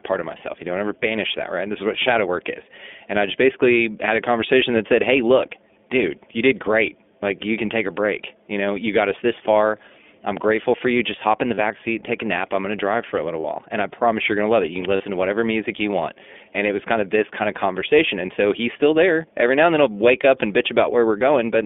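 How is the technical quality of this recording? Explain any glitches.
The recording is narrowband and audibly codec-processed, with three brief dropouts in its second half.

Throughout, the speech sounds thin, slightly rough and synthetic, with nothing below about 200 Hz or above about 3.5 kHz. This is the iLBC codec at work, a narrowband VoIP coder that codes each frame's excitation independently. The damage is plainly audible and fits its higher-rate mode of about 15.2 kbps with 20 ms frames.

At 11.54 to 11.59 s (after "hop in the", before "seat take a nap"), 13.40 to 13.45 s (after "drive for a little") and 14.96 to 15.03 s (before "to whatever music you"), there are short, slightly buzzy, held-vowel smears. These are lost iLBC frames. For each gap of about 40 ms, which fits two missing 20 ms frames, the decoder repeats the last pitch cycle mixed with noise. Normal speech returns almost immediately afterwards.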